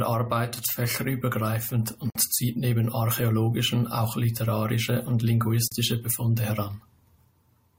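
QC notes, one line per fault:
2.10–2.15 s and 5.68–5.72 s, gap at a join of encoded pieces: Speech breaks off in a gap of about 53 ms after "arbeitet fächerübergreifend", then about 40 ms after "archäologischen auch literarische und". Separately encoded segments were joined untrimmed. Encoder start delay and last-frame padding left holes with smeared edges.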